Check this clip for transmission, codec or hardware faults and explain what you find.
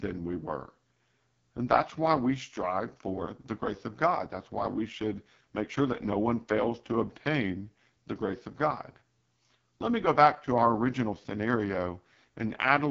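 One fault runs through the whole clip: AMR wideband (HD Voice) codec coding at a heavily damaging rate. The speech is band-limited, with nothing above 7.5 kHz, and it sounds rough and raspy throughout. That texture fits AMR-WB's lowest mode, around 6.6 kbit/s. At that rate the pulse-driven vocal tract model has too few bits to follow the voice, so the excitation turns gritty, and the top band above 6.4 kHz is filled with shaped noise rather than real detail. A narrowband codec would cut off near 3.4 kHz instead, and a plain low-pass filter would sound dull but not raspy.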